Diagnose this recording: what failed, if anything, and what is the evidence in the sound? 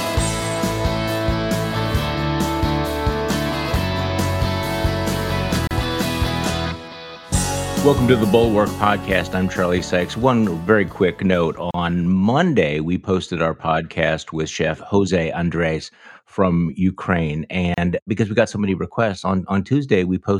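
Codec stage: a gap at a join of encoded pieces recurs every 6 s, at 5.67–5.71, 11.71–11.74 and 17.74–17.78 s, each about 35 ms. Separately encoded chunks were concatenated with their encoder delay and last-frame padding left in. On a spectrogram it shows as full-band blank stripes with slightly smeared edges, and the waveform flatlines before resuming where it stopped.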